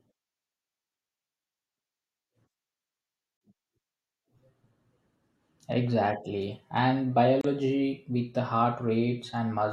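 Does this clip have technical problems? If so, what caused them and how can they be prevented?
Yes. Gaps at joins of encoded pieces open at 3.37–3.41 s (42 ms) and 7.41–7.44 s (32 ms), about 4 s apart: pieces encoded separately keep encoder delay and final-frame padding as silence. Trim the delay and padding before joining.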